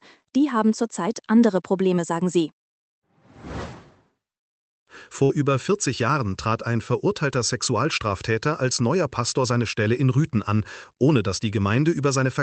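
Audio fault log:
5.23–5.32 s burst of packet loss: about 60 ms of audio is lost, and the receiver stretches and fades the last sound for 58 ms, heard as a brief held buzz or hiss before the audio skips ahead. The spectrogram shows smeared, fading bands, and the waveform shrinks and then jumps.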